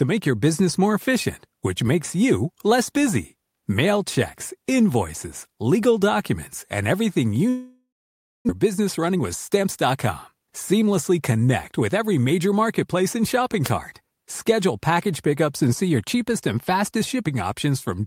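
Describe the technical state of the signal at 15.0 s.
At 15.0 s the speech signal is intact, with no audible technical fault at that moment.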